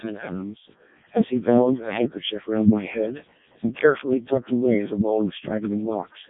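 Speech run through a Codec 2 vocoder throughout, heavily damaged, robotic and buzzy, pointing to the lowest 700 bit/s mode; a spectrogram shows smooth synthetic harmonic combs and nothing above 3.8 kHz.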